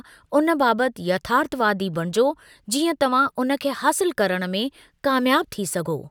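No technical faults can be heard anywhere in this recording.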